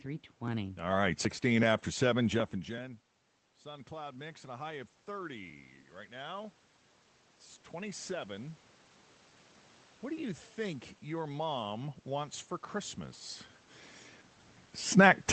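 From 3.63 s to 6.6 s the voice and the room noise behind it swell together, slowly, by about 5 dB. This is automatic gain rising: the talker moved back around 2.5 s, dropping the input by about 19 dB, and the gain control climbed gradually to compensate.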